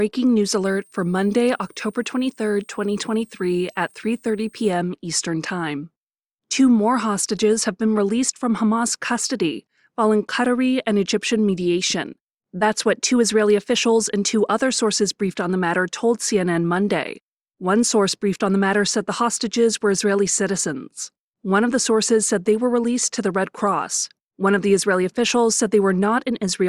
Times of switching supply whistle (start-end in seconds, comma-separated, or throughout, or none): 0.65-4.70